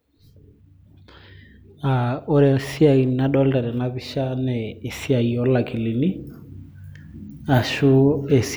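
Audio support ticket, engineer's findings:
No audible faults found.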